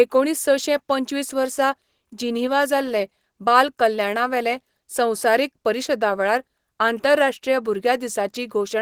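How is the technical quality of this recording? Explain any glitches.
The technical quality of this recording holds up, with no glitches to explain.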